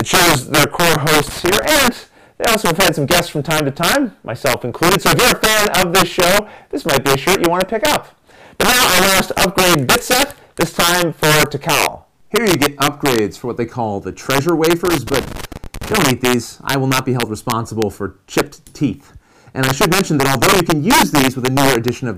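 A gain stage somewhere in the chain pushes the signal about 6 dB past the largest value its integer format can hold, and instead of being limited the excess wraps around to the opposite sign. This integer overflow runs through the whole recording, catching only the loudest peaks, a small share of samples, around three percent. Each wrapped peak jumps across the full range, so loud moments break into violent, harsh cracks far sharper than ordinary clipping.

At 1.22 to 1.65 s, and again from 14.85 to 15.98 s, a worn or dirty contact in the signal path starts making and breaking rapidly, the classic loose connector crackle. The sound is chopped on and off many times in quick succession, and any DC sitting on the line turns each break into a pop. The result is an irregular burst of scratchy crackle, short in the first instance and lasting just over a second in the second.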